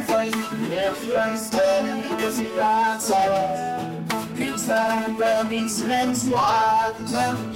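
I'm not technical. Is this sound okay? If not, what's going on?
Yes, this one sounds fine, with nothing wrong to point out anywhere in the recording.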